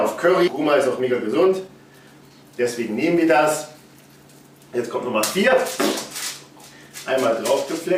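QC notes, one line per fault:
0.47–0.49 s, skip ahead: roughly a second of audio never plays. It was lost in transit or discarded when the jitter buffer overflowed while later audio already sat queued, so playback leaps forward and the two sides butt together with no gap filled.
0.63–4.40 s, jitter buffer speed-up: with more audio buffered than its target, the receiver cut repeated short pitch-period slices, about 0.4 s in total, to shrink the delay. The sound runs at 112% speed with unchanged pitch, so it comes across as hurried.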